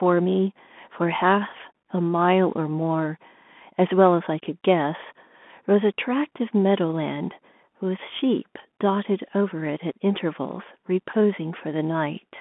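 From start to finish the speech carries Bluetooth CVSD headset codec damage. The band is squeezed to roughly 200 Hz to 3.5 kHz, and the coarse one-bit delta coding, which fits a 64 kbps CVSD link, cannot track fast rises, so sibilants turn scratchy and a granular hiss sits beneath the speech. A spectrogram shows a hard ceiling near 3.5 kHz with a grainy noise floor below it. The waveform shows staircase-like, slope-limited edges on sharp transients.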